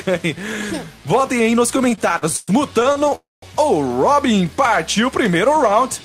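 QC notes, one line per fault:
1.77–3.13 s, repeated stalls (stutter): sixteen short gaps, the longest 111 ms, are filled by stretching the last sound, so about a quarter of the passage drags rather than dropping out.
3.15–3.44 s, call audio freeze: a single 271 ms hold where the sound buzzes, fades and sits silent for about 190 ms, then resumes intact, likely a delayed packet burst emptying the jitter buffer.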